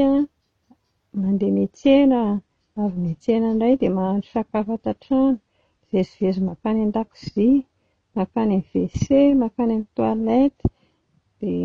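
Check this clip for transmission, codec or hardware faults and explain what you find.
One transmission fault is audible. From 1.70 s to the end of the speech, the sound abruptly grows swirly, with no gap: an adaptive stream at a lower bitrate. The connection likely slowed, so the player switched down mid-stream, which fits a drop from about 96 to 32 kbit/s AAC.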